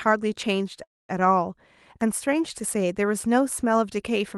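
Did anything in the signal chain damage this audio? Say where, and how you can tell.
Yes. Between 0.83 and 1.20 s the speech halts and the gap is filled with a decaying buzz that drops to near silence for about 230 ms before the speech resumes exactly where it stopped. No audio is lost; the rest of the clip simply arrives about 255 ms late. This call audio freeze is likely a network stall: packets were delayed, the receiver's jitter buffer ran dry, and the decoder extended the last sound until data returned.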